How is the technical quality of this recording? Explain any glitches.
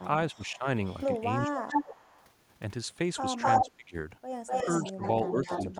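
The recording has real problems. It's a speakerphone-style call with echo coming back repeatedly, and the far talker gets ducked each time.

Echo leak shows up at 0.34–1.05 s, 1.42–2.27 s, 3.41–3.71 s and 4.46–5.65 s. You hear a delayed copy of the speech, 362 ms late in the first stretch and 250 ms late in the rest. The first one is faint, roughly 25 dB down. From 1.42 s on it's within about 5 dB of the speech, louder in one stretch and quieter in another. That points to a loudspeaker feeding the far end's mic, with the echo canceller there likely failing to cancel it.

Speech suppressed in double talk overlaps those stretches at 0.35–0.66 s, 1.48–1.81 s, 3.61–3.95 s and from 4.65 s to the end. The talker's level dips by something like 10 to 20 dB, worst in the later ones, for a few hundred milliseconds at a time. The canceller likely couldn't tell the live talker from the echo while both were present, so it turned everything down. 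The speech sounds pumped and briefly swallowed.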